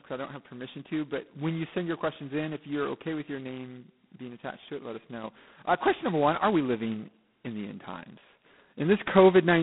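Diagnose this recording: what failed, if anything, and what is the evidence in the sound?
The failure is at the codec stage: G.726 ADPCM at its lowest rate, with a harsh, rasping hiss riding on the speech throughout and rising and falling with its level, which points to 16 kbit/s, about two bits per sample of prediction error. A spectrogram shows a telephone band from 150 Hz to 3.5 kHz, empty above 3.9 kHz, with grainy noise filling the gaps between harmonics.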